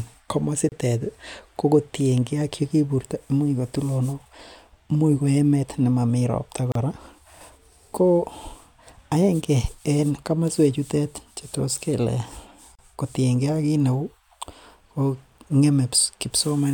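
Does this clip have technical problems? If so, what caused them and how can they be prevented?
Yes, there's a gap at a join of encoded pieces every 6 s: brief dropouts of about 30 to 34 ms at 0.69 to 0.72, 6.72 to 6.75 (just after "ko emet nemomii ropta") and 12.75 to 12.79 s. Each separately encoded chunk kept its start delay and final-frame padding. Trim both before joining, or encode in one pass.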